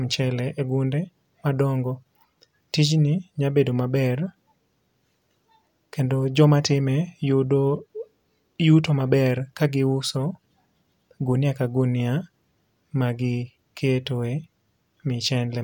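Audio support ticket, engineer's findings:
No faults found in the speech signal; levels, continuity and timing hold steady throughout, with no dropouts, glitches or artefacts identified that would point to a failing component.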